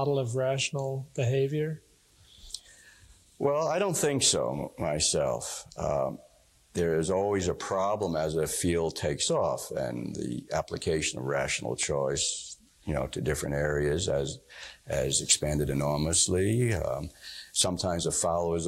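At 11.83 to 11.85 s a single loud pop sits on top of the sound, peaking a few decibels above it, likely a brief voltage spike from a switch, plug or static discharge. From 14.93 to 17.62 s the audio shows pre-emphasis left on: the CD-style 50/15 µs treble boost was never undone, leaving 10 kHz about 8 dB above 1 kHz, so it sounds thin, bright and sibilant.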